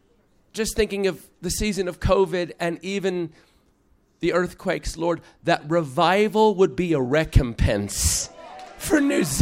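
No technical faults can be heard in this audio.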